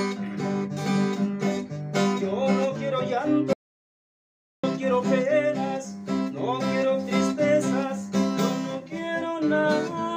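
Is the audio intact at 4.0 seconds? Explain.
No. From 3.53 to 4.64 s there is an audio dropout to silence: the sound cuts off mid-flow and returns abruptly 1.1 s later, likely from a lost input while recording continued. Unlike a natural pause, the gap is silent with no room tone.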